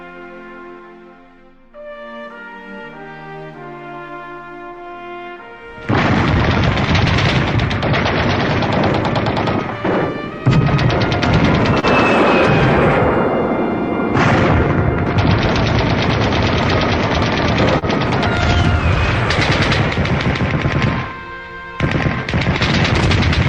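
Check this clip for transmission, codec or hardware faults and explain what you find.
Two brief dropouts show up as short concealed packet loss, at 11.79–11.86 s and 17.79–17.85 s. About 40 ms of audio never arrived each time, and the decoder papered over it by extending the preceding sound for about 30 ms before crossfading back. Each gap is heard as a brief smear or wobble. On a spectrogram, the harmonics or noise texture briefly freeze and flatten. Where the sound was voiced, the waveform shows a repeated cycle pattern.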